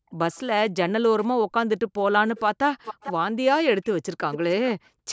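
Speech recorded through call microphone processing, with energy ending at 8 kHz, repeatedly dips and breaks up where both sides were likely talking at once. This speech suppressed in double talk runs from 0.0 to 0.35 s, 0.7 to 1.09 s, 1.29 to 2.35 s, 2.52 to 3.37 s and 3.63 to 5.09 s. The level drops by up to around 40 dB in fragments, which shows as notches and gaps in the waveform envelope and as blank or thinned vertical slices on a spectrogram. Echo leak appears as a delayed copy of the speech returning from the far end's loudspeaker, an echo the canceller likely failed to remove. It is very faint at 0.32 to 0.4 s, roughly 484 ms late. It is louder, around 10 dB below the speech, at 2.84 to 3.13 s and 4.32 to 4.38 s, lagging by about 447 ms. On a spectrogram it shows as a weaker ghost of the earlier harmonic pattern shifted right in time.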